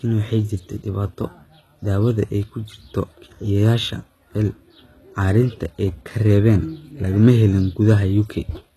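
Speech, with audible HE-AAC compression damage throughout. The treble sounds synthetic, and s sounds come out gritty and metallic. Nothing reaches above about 12.3 kHz. The likely cause is spectral band replication rebuilding the top from copied lower bands, pointing to roughly 16 kbps.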